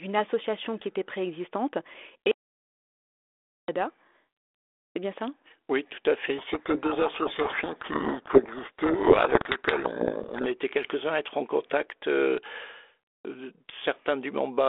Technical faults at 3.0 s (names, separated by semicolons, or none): audio dropout to silence